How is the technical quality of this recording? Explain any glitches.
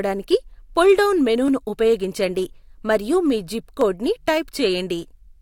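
There is one glitch: a sharp click at 3.81 s, between "మరియు మీ జిప్" and "కోడ్ ని". It is likely dropped samples. A fraction of a millisecond is missing, so the waveform jumps abruptly to a later value. Nothing audible is lost, but the step produces a single brief click.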